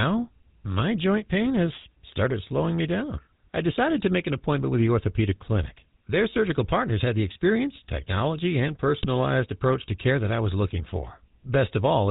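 Throughout, the speech has the buzzy, gravelly roughness of the GSM full-rate codec, at about 13 kbps. Its pulse-driven excitation is coarse, and nothing above 4 kHz survives. From 8.98 to 9.06 s, GSM bit errors strike. Corrupted filter, pitch or gain values distort a few frames, and the speech breaks into a squawking, gargling burst.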